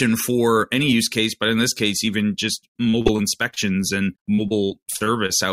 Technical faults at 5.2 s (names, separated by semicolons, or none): repeated packet loss (robotic sound)